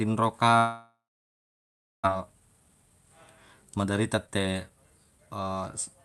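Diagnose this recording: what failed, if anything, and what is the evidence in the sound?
Network stage, likely a long network dropout. From 0.57 to 2.08 s the sound decays into a fading buzz, then silence, and about a second is missing.

Jitter buffer speed-up at the receiver. Speech runs hurried at unchanged pitch from 2.15 to 2.91 s (113%) and 3.77 to 5.48 s (122%), as pitch periods are trimmed to drain the backlog.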